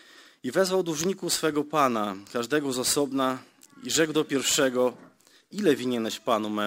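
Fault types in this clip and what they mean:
Sample clock jitter: The converter's clock wanders, so each sample lands a little early or late. The timing error is large, around 10 microseconds. That error matters most where the waveform changes fast. So the audio carries a grainy hiss that swells on loud and bright passages and falls away in quiet gaps. It sits roughly 20 dB below the sound itself. It runs through the whole clip.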